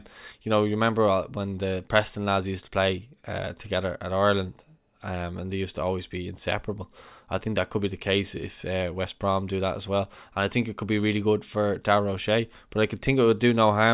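No technical faults can be heard anywhere in the audio.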